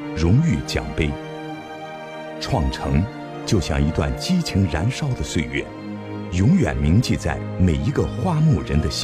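No technical faults are audible.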